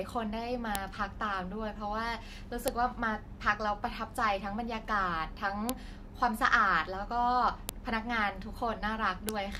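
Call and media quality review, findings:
File header played as audio, speech clip. Sharp loud clicks at 0.75, 2.68, 5.69, 7.69 and 9.29 s, each a millisecond or less. Segment joining or streaming stage. Each piece's WAV header bytes left in and played as samples, snapping regardless of the speech.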